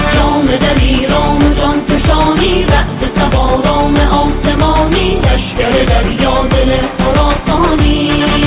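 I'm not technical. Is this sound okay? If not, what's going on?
Yes, it's fine: nothing in it sounds broken or glitchy, so there's nothing here to worry about.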